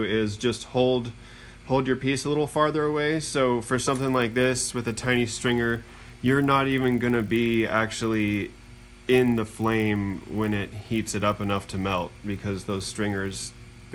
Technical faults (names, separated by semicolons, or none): resampler restarted on every block